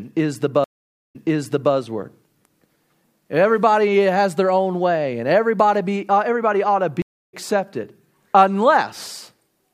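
Stream reconnects after "is the" (0.64 s) and "uh everybody ought to" (7.02 s): the connection dropped, leaving flat waveform gaps of 0.5 s and 0.28 s. A fresh decoder then resumes 0.6 s earlier (repeating audio) and about 0.2 s later (skipping).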